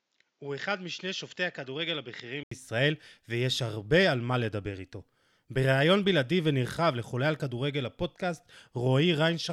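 Until 2.51 s the speech is dull and quieter, cut off above 7.6 kHz, likely an input switched to a poorer device; an 80 ms gap marks the switch.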